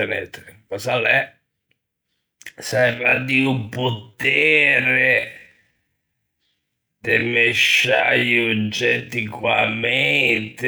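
From 2.61 s to the end there's a time-stretched section: the speech suddenly drops to about 0.54× pace at the same pitch, sounding dragged, likely from software repeating short pieces.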